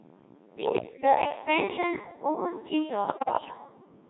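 Right from the start the whole clip runs through a Codec 2 vocoder, and it's heavily damaged. The buzzy, robotic quality fits a rate around 1.6 kbit/s. The decoder only gets pitch, voicing, energy and a spectral envelope for each frame, then rebuilds the speech from sine waves, so the original waveform is gone and what's left sounds like a synthetic stand-in for a person.

From 0.57 to 1.05 s there are bit errors on digital voice radio. The voice jumps around in pitch and level and its tone colour lurches, with warbly bleeps. That's consistent with roughly 7 percent of bits flipping across about a dozen frames, each bad bit throwing off a whole frame's parameters. It happens again from 3.08 to 3.58 s, and it's worse this time, turning into robotic gibberish. That fits an error rate of around 15 percent over a similar stretch of frames.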